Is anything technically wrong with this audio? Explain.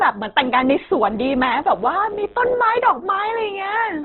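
Yes, there are two faults. Throughout, the speech sounds band-limited, rough and grainy, with nothing above 4.2 kHz, likely from heavy Opus compression at a low bitrate around 12 kbps. From 1.04 to 2.54 s, a mains buzz enters: switching spikes at twice the 50 Hz cycle produce harmonics giving a steady, raspy buzz, well below the speech level.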